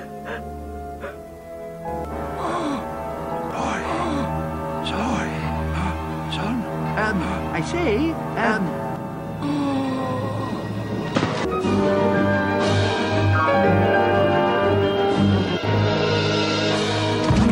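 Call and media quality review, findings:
Doubled audio track, 1.88–8.96 s: full-band copy trailing by roughly 1.5 s at about equal level, cutting in and out abruptly. Likely a second capture path or misaligned edit. Unlike acoustic echo: no decay, no room colour, no repeats.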